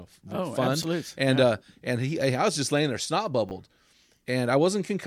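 At 0.82 s and again at 3.49 s, the speech has chunks out of order. In each spot a 10 ms piece plays one chunk late, after the piece that should follow it. Nothing is lost. The swap creates three hard joins, heard as a brief jumbled moment.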